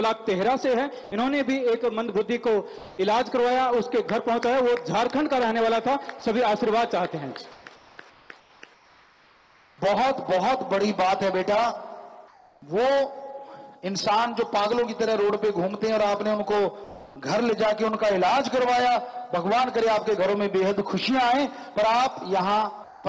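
At 1.04 to 1.12 s, 6.20 to 6.22 s and 22.84 to 23.04 s, sound is dropped by the voice detector, likely because quiet material was taken for background. Brief steady noise replaces it. On a spectrogram, detail gives way to a flat band, and the waveform drops to low uniform fuzz.

At 2.78 to 2.98 s, 7.52 to 9.78 s, 12.28 to 12.62 s and 16.84 to 17.16 s, comfort noise replaces the background, likely from discontinuous transmission during pauses. The textured background, sitting about 24 to 34 dB below the loud parts, becomes featureless hiss. Its level shifts by about +1 dB, about -2 dB, or not at all, and on a spectrogram it shows as smooth, even shading. Above 8 kHz the spectrogram is empty throughout, which fits a wideband call codec.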